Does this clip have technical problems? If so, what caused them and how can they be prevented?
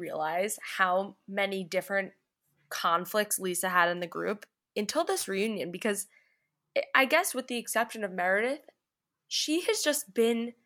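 Yes. From 3.97 to 5.47 s the speech picks up a gritty, inharmonic fizz. This is crude rate conversion. The audio was resampled by simply dropping or repeating the nearest samples, with no filtering. The pattern fits a 48 kHz to 44.1 kHz change. The small timing errors repeat in a fixed cycle. They create tones unrelated to the voice, about 20 dB below it. To prevent this, use a proper band-limited resampler.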